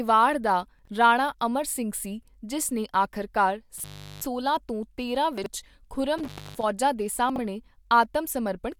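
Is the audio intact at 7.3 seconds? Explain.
No, there's a chunks-out-of-order glitch from 7.30 to 7.38 s: a roughly 21 ms chunk plays about three chunks late, so the speech briefly jumbles.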